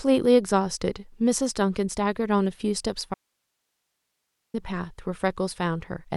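At 3.14 s the speech cuts out abruptly, leaving faint hiss far below the signal until 4.54 s. This audio dropout to a faint residue likely reflects a lost feed.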